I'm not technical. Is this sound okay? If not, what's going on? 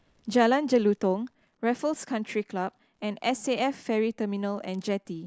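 Yes, the speech has no technical faults anywhere in the clip.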